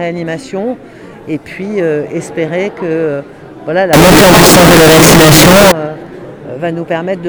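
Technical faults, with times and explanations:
3.93 to 5.72 s, float read as integer: the audio suddenly jumps to a harsh, near-square roar at an almost fixed, high level, with quiet background sound as loud as the main content, though pitch still comes through. It's likely 32-bit float samples being read as 32-bit integers, so sign and exponent bits dominate.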